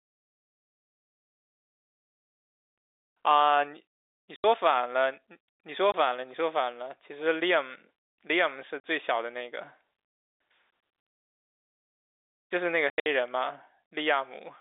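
Packet loss filled with silence breaks the speech five times. Dead gaps open at 2.8 to 3.06 s, 4.36 to 4.44 s, 5.92 to 5.94 s and 8.8 to 8.83 s. From 12.9 to 13.06 s, several shorter holes cluster, the longest about 80 ms. Every gap is a whole multiple of 20 ms, which fits 20 ms packets. The receiver played nothing for the missing packets. Each hole starts and stops abruptly inside the telephone-band G.711 sound.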